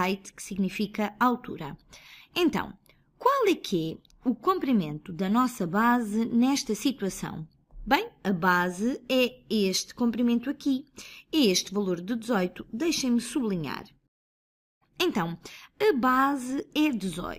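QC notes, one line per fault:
Throughout: crude rate conversion. A gritty, inharmonic fizz rides on the louder and brighter parts of the sound, roughly 25 dB below the signal and unrelated to its pitch. The sound fits a 32 kHz source raised to 48 kHz by a 1.5 ratio, where samples were simply repeated to fill the gaps with no interpolation filter. That stepwise repetition recurs every few samples and folds high content into spurious tones.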